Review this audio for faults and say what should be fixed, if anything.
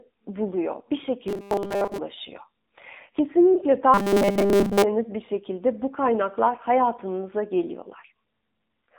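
Throughout, the speech carries AMR narrowband mobile codec damage. The band runs only from about 200 Hz to 3.7 kHz, and the buzzy, synthetic texture is plainly audible, which fits a low AMR-NB mode around 7.4 kbps. Prevent it by using a wideband codec or a higher bitrate mode.

From 1.28 to 1.98 s and again from 3.94 to 4.84 s, there is robotic sound from repeated short buffers. A rigid, metallic 200 Hz buzz is heard, matching 5 ms segments replayed while most of the real audio is skipped. The likely cause is playback starved of new data. Prevent it with a larger jitter or playback buffer and steadier audio delivery.

At 3.54 to 3.59 s, one lost AMR speech frame, about 20 ms, produces a brief dip or warble as the decoder extends the previous frame's settings at reduced gain. Prevent it with better radio link quality or stronger error protection on the speech frames.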